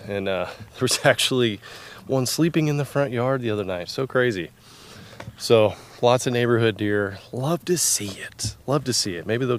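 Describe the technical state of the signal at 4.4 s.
At 4.4 s the signal is intact, with nothing audible there that points to a technical fault.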